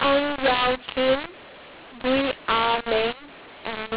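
mu-law and A-law mixed up throughout: A-law telephone samples are decoded as mu-law, scrambling levels so the speech turns harsh and distorted and pauses fill with noise.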